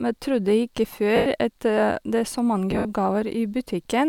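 At 1.16 to 1.26 s, lost LE Audio frames leave a 100 ms hole. The decoder fills it by repeating the last spectrum with random signs, so the sound smears into noise. At 2.71 to 2.85 s, 110 ms is lost in scattered bursts, the longest about 70 ms.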